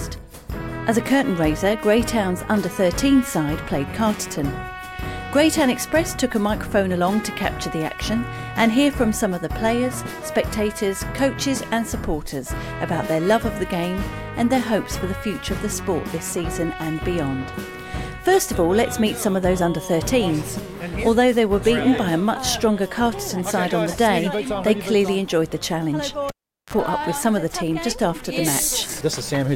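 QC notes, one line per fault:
26.29–26.74 s, cable pulled and plugged in: a sharp pop opens a gap of about 0.4 s of near silence. A short burst of 50 Hz mains buzz lasting about 35 ms follows, and a second pop marks the sound returning. A live cable was pulled out and pushed back in. The first pop is the contact breaking. The buzz comes from the plug tip touching before the ground made contact, which left the line open to mains hum. The second pop is the full connection seating.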